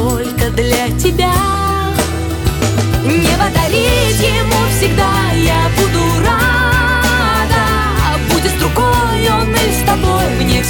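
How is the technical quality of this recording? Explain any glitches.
Quality's let down by periodic USB or driver dropouts: from 0.54 to 10.54 s, every 1.0 s, something blocks the audio path and roughly a millisecond drops to silence, giving regular ticks.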